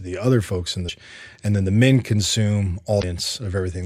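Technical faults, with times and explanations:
0.85 to 0.90 s, damaged data in a compressed stream: corrupted frames right after "the other folks in" make the decoder lose sync and hunt for the next header, producing a brief glitch.
1.35 s, dropped samples: a sharp single click, likely from a fraction of a millisecond of samples going missing, so the waveform jumps abruptly to a later value.
2.99 to 3.04 s, damaged data in a compressed stream: about 40 ms of bad frames again throw the decoder out of sync, giving a short glitch.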